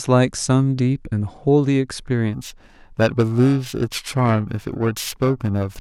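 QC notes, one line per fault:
2.33–5.80 s, periodic clock jitter: from 2.33 s to the end of the speech, the converter's sample clock is being shaken at a single rate of around 1 kHz, so each frequency component is flanked by sidebands at about 1 kHz above and below. Higher-frequency content picks up stronger sidebands, which gives a rough, metallic edge to sibilants and bright parts. In pauses there is nothing to modulate, so the edge disappears.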